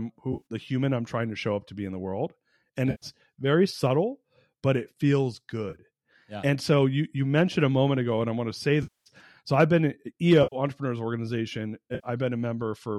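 Speech carried over an AAC link that dropped frames, with the decoder rebuilding each gap from the last good spectrum. This AAC frame loss with concealment produces short smeared, noisy patches at 0.33 s (scattered in brief bursts just before "the human i'm trying"), 2.91 s, 5.70 s, 8.83 to 9.09 s after "i want to say", 10.43 s after "so i've been", and 11.95 s. The slight roughness throughout is likely the low-delay AAC compression itself.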